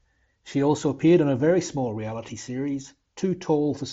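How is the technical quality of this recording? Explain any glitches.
No glitches; the speech comes through without faults.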